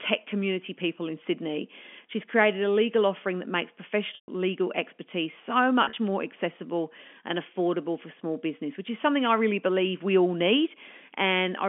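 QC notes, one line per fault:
2.85–4.62 s, loudspeaker feedback squeal: after "created a", the microphone picks up its own loudspeaker output, and at 4.6 kHz the loop gain exceeds unity. That frequency reinforces itself on every pass, so a thin, piercing tone swells over roughly a second and a half until it stands around 10 dB above the speech. It then cuts off just before "expertise so".
4.15–4.28 s and 5.84–5.96 s, packet loss with pitch repetition: the first gap is 130 ms of lost audio, which fits a run of 10 ms packets going missing. The receiver bridges it by repeating the last pitch cycle, so a buzzy held tone fades into a brief silence beneath the squeal before a cross-fade back. The second gap falls between "expertise so" and "more accessible and affordable" and loses 80 ms scattered over 120 ms, with no run longer than 40 ms. Here the repetition is heard as short, stuttering held fragments rather than a dropout.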